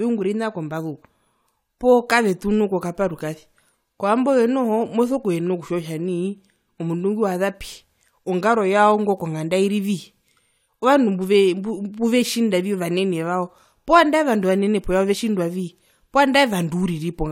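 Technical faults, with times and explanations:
Nothing technical goes wrong anywhere in this speech recording, so there's nothing to list.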